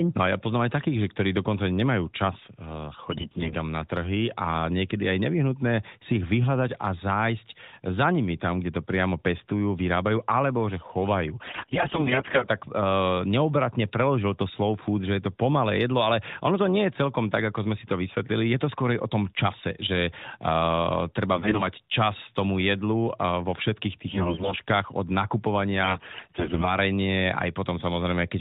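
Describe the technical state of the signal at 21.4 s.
At 21.4 s the audio has AMR bit errors. They run from 21.36 to 21.67 s, about a third of a second, which fits roughly a dozen damaged 20 ms frames of the narrowband AMR mobile codec. A heavy share of the lightly protected bits, around a fifth, arrived flipped while the frame checks still passed. The excitation pulses land in the wrong places. Fine gain, pitch and spectral values drift. Pitch and level hold roughly, but the sound turns hoarse, scratchy and gargly.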